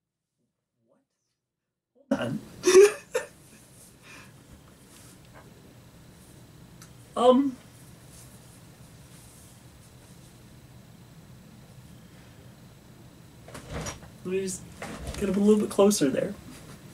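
The signal path likely lost its feed while the chain after the break stayed live, an audio dropout to a faint residue already under way as the clip opens. Until 2.11 s only a faint leak roughly 40 dB below normal remains, then the full sound returns abruptly.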